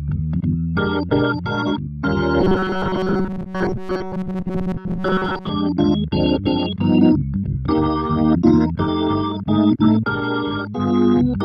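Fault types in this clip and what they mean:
Robotic sound from repeated short buffers: new audio was arriving too seldom, so playback kept looping the last few milliseconds and skipped the incoming audio it covered. From 2.41 s to 5.50 s most of the sound consists of these repeats, likely from this buffer starvation. Their spacing forces a rigid, metallic buzz at 188 Hz, which fits a loop about 5.3 ms long, and the underlying sound is followed only loosely.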